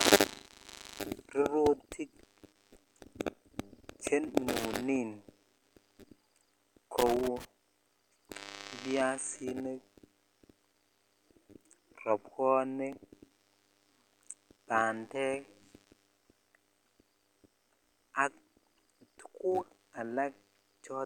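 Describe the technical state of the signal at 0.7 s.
At 0.7 s the signal is intact, with no audible dropout, distortion or other technical fault.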